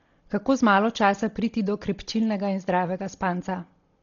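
Throughout the speech, heavy damage points to a starved transform coder, likely Dolby Digital compression at a very low bitrate, around 32 kbps. To save bits, the encoder has cut the band so that nothing is left above 6.9 kHz, and many frequency lines get no mantissa bits and are filled by the decoder with dither noise. The result is dull, muffled speech with a rough, fluttering hiss clinging to the voiced tones.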